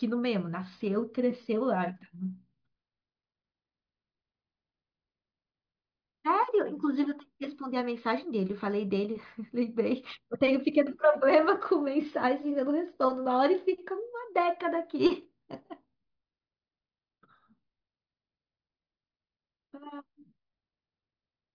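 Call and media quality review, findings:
No audible faults found.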